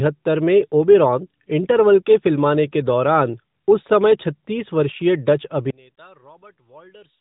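From 5.70 s to the end at 7.20 s, the speech collapses by about 28 dB to a faint residue, most likely one channel inverted, so the shared centre cancels when summed to mono. Unlike a dropout, a faint trace remains, still band-limited by the AMR narrowband path.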